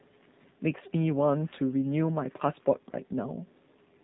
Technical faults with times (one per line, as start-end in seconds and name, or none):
0.00-4.04 AMR narrowband mobile codec